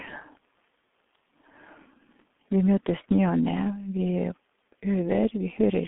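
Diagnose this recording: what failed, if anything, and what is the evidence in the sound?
Muffled, hoarse speech runs through the whole clip. Nothing is left above about 3.8 kHz, the band sits roughly between 200 Hz and 3.5 kHz, and consonants smear together. The failure is at the codec stage: G.723.1 compression at a very low rate, consistent with its 6.3 kbit/s mode. The codec models the voice in 30 ms frames and updates that model slowly, so fast articulation blurs and the heavy coding leaves a rough, hoarse texture.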